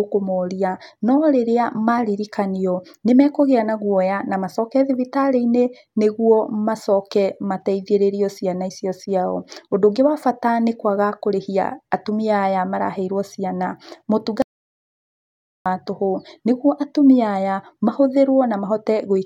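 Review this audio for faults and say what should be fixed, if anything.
An audio dropout to silence runs from 14.42 s to 15.66 s. The speech cuts off mid-flow and resumes about 1.24 s later, with dead digital silence in between and no room tone. The likely cause is a lost input, such as a loose connection or a brief mute, while recording carried on writing silence. On a waveform this is a flat line; a spectrogram shows a blank black band across all frequencies. Secure connections and monitor input levels during recording to prevent it.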